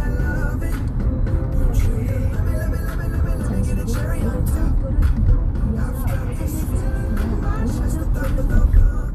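Nothing in these everyday sounds points to a technical fault at any moment, so there's nothing here to flag.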